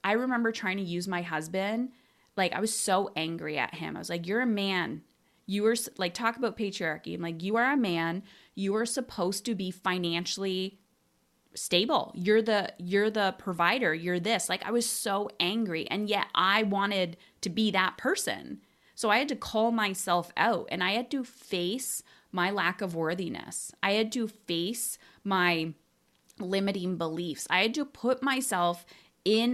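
Nothing goes wrong anywhere in this bit of speech, so there's no technical fault to point to.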